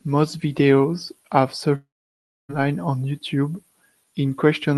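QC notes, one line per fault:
1.75–2.51 s, long network dropout: right after "videos have", the sound smears into a buzzy, hissing continuation that fades out. About 0.63 s of near-silence follows, and the speech resumes at 2.51 s with roughly 0.74 s of it gone. The likely cause is a stall in arriving audio on the Opus call path. The receiver stretched the last sound to cover the gap, then gave up and played silence until the stream returned.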